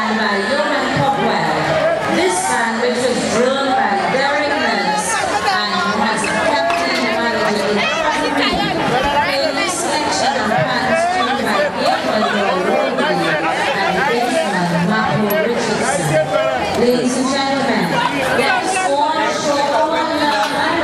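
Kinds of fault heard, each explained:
Nothing stood out as a fault on careful listening to this clip.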